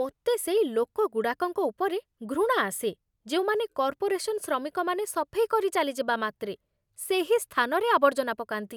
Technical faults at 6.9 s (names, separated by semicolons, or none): none